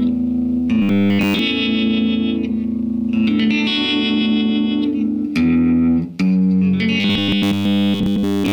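Robotic sound from repeated short buffers appears from 0.82 to 1.39 s and again from 7.00 to 8.52 s as a rigid 100 Hz buzz. It likely comes from a 10 ms block replaying with nearly everything skipped. A waveform shows identical repeating cycles, and a spectrogram shows even 100 Hz harmonic lines.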